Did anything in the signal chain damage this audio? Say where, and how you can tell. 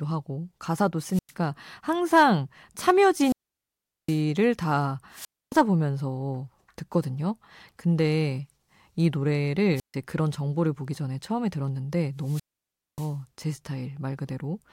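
Yes. Five times the speech gives way to a short burst of hiss, then a hole of near silence, then returns: at 1.11 to 1.33 s, 3.13 to 4.23 s, 5.11 to 5.59 s, 9.75 to 9.95 s and 12.20 to 13.17 s, with the silences lasting about 0.10, 0.76, 0.27, 0.14 and 0.58 s. This is wireless microphone squelch dropout in the analogue FM radio link. Each time the carrier fades, noise rises, and the receiver's squelch mutes the output until the signal recovers.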